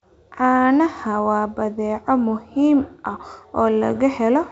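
No technical faults can be heard in this speech: the G.722 wideband telephone coding at 64 kbit/s carries the sound out to about 7 kHz, with any hiss in the upper band faint at most.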